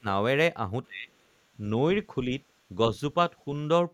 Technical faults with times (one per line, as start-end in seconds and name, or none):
0.00-0.05 speech suppressed in double talk
0.86-1.11 speech suppressed in double talk